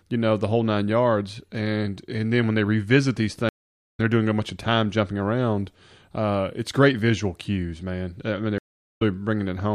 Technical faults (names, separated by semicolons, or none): stream reconnect